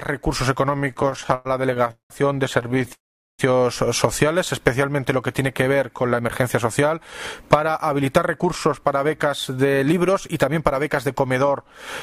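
The audio drags and stutters from 0.77 to 2.12 s, breaking up about two dozen times, the longest hold lasting 192 ms and more than a third of that stretch filled in. It stutters again more finely from 2.60 to 2.91 s with brief holds of up to 16 ms. These are repeated stalls (stutter): packets arrived late or too slowly, so the jitter buffer kept running dry and the receiver stretched the last sound each time, with nothing lost. From 2.93 to 3.41 s the sound stops, mostly in silence, for about half a second before picking up where it left off. This call audio freeze most likely came from packets being held up in transit, which emptied the buffer and inserted a gap. From 6.16 to 11.08 s the audio runs about 7% fast at unchanged pitch and sounds hurried. This is a jitter buffer speed-up, in which the receiver trimmed roughly 0.4 s in small pitch-period slices to shed built-up delay.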